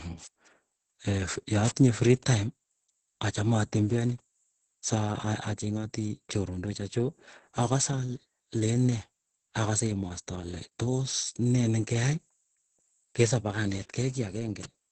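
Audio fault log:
Throughout: Opus voice compression. The speech sounds muffled, hoarse and faintly robotic, with nothing above about 8.6 kHz. The damage is heavy. It points to Opus in SILK wideband mode near 10 kbps, where the linear-prediction coder quantises the excitation coarsely in 20 ms frames.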